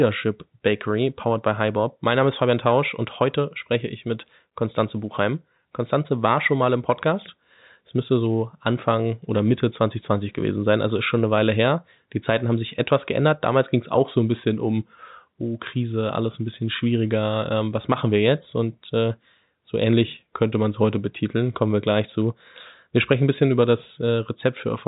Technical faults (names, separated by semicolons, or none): none